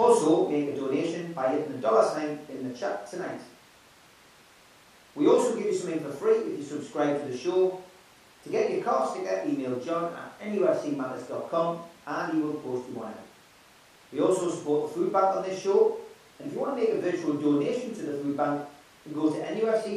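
Speech recording; no technical faults heard anywhere in the clip.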